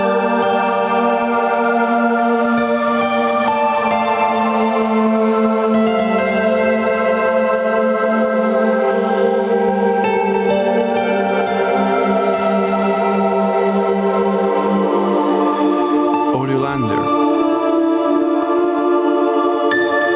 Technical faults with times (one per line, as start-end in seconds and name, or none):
0.00-20.15 gain pumping